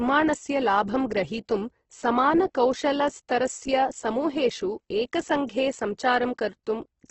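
A speech clip with Opus compression damage all the way through: the voice sounds grainy and rough rather than swirly, since band energy is kept but filled in with noise, and nothing reaches above 8.1 kHz. That likely points to a heavily squeezed CELT encode around 12 kbps.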